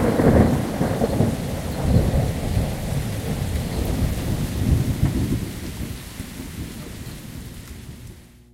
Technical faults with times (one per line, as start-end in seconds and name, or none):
0.00-8.54 mains hum